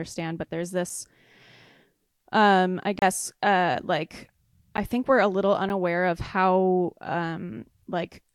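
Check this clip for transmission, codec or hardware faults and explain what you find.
Three short blocks of digital silence interrupt the speech. The first runs from 2.99 to 3.02 s, a 30 ms hole right after "um I" and before "uh like I think". Two briefer ones follow at 4.77 s (10 ms), after "uh like", and at 5.69 s (about 8 ms), after "think we're a little". In each, a run of samples is replaced by silence, typically because the output buffer wasn't filled in time. The signal stops and restarts with no fade. The 30 ms gap is heard as a brief hole. The two shorter ones are closer to single ticks. What separates these from a packet-loss dropout is that nothing is concealed or smeared: the signal drops to silence and back, with no faded edges and no stretched or repeated sound filling the gap.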